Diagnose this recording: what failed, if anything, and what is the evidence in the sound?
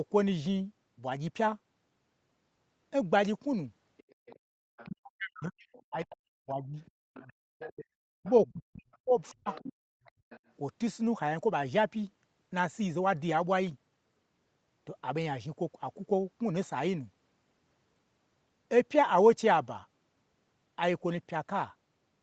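The failure is in call processing, specifically the echo canceller of a loudspeaker call. A faint second voice, the other side's voice leaking through, sits under the talker from 3.97 to 4.89 s, briefly again from 5.72 to 5.83 s, and for a longer stretch from 6.86 to 10.4 s. It runs roughly 20 to 30 dB below the main speech. The likely cause is loudspeaker playback reaching the microphone and surviving the canceller's subtraction because the echo path was not fully modelled.

The background is gated by the echo canceller at two points, both in the same stage. From 4.54 to 4.58 s the room sound drops by about 32 dB for roughly 40 ms. From 7.06 to 7.58 s it dips again by about 32 dB, for around a third of a second in total. Each drop lines up with the leaked far-end signal: the canceller detected loudspeaker activity, clamped the microphone path hard, and then let go.

Speech is suppressed in double talk from 4.87 to 6.78 s and from 8.02 to 9.48 s. 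The talker's voice dips, by around 40 dB at the deepest. The affected spans total about a second and a half in the first window and about a second in the second. The likely cause is the canceller failing to separate near-end speech from the echo while both sides were active, so it attenuated everything. All of this sits within a band limited to 8 kHz.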